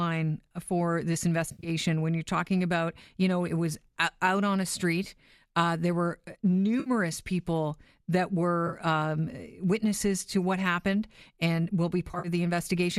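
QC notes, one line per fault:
1.49–1.69 s, 6.80–6.90 s, 8.67–8.78 s, 12.08–12.28 s, AAC frame loss with concealment: brief smeared, noisy, phasey patches. The decoder rebuilt missing audio, roughly 60–120 ms per event in gaps of up to about 70 ms, from the last good spectrum. The stream is likely low-delay AAC.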